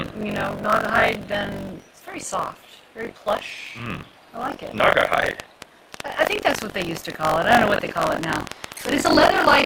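Throughout, the writer and reader of the output ring buffer have slipped, so buffer tearing swaps about a fifth of each period for audio roughly 40 ms old, giving a constant 46.9 Hz robotic buzz that fits a 1024-sample buffer.

From 1.33 to 1.35 s, a skip ahead drops about a second of audio while later audio was already waiting, and playback jumps forward with no gap.

From 1.94 to 2.63 s, a jitter buffer speed-up trims roughly 50 ms of pitch periods to cut excess delay, so the sound runs 6% faster at unchanged pitch and feels hurried.

From 5.26 to 9.61 s, a train of clicks, likely from interference or a faulty connection, adds around 40 similar pulses at an uneven 7.8 per second, each about 15 dB above the signal, ticking over the sound.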